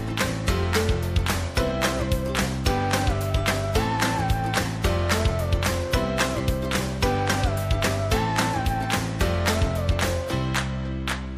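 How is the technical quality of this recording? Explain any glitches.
No glitches or technical faults are audible anywhere in the recording, and the signal holds steady throughout.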